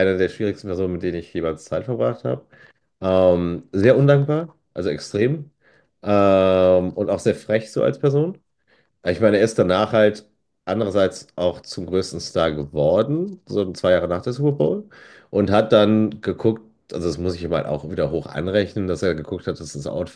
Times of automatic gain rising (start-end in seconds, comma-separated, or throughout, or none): none